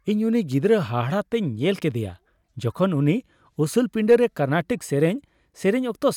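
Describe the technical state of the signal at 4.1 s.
At 4.11 s the speech runs into hard clipping, lasting about 46 ms until 4.15 s. The peaks push roughly 2 dB past what the converter or processing stage can pass, so their tops are sliced flat, and those flat edges generate harmonics high up the spectrum. It is heard as a brief crackle on the loud peak. A waveform shows squared-off crests, and a spectrogram shows a thin vertical smear of broadband energy reaching into the upper kHz range.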